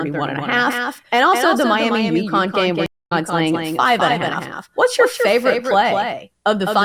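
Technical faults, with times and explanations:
Throughout, doubled audio track: the whole clip carries a second copy of the speech trailing roughly a fifth of a second behind, sitting about 5 dB under the original. It's full-band with no decay or room colour, so it reads as a clean slapback rather than reverb. The likely cause is the same signal being picked up a second time through a slower path, or an edit that left two copies out of step.
2.86 to 3.12 s, stream reconnect: the audio drops out for 233 ms, and when it comes back it has jumped ahead by roughly 200 ms, so a short stretch of speech never arrives at all. That's the connection breaking, the player sitting silent while it reconnects, and then a fresh decoder picking the stream up mid-flow at a later point rather than where it left off.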